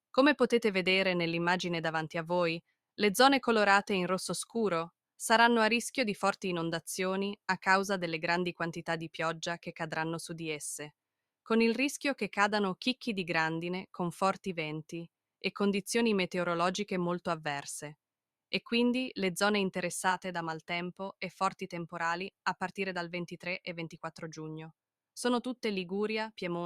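No technical faults can be heard anywhere in the recording.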